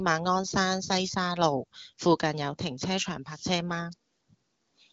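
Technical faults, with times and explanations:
No technical faults are audible anywhere in this speech.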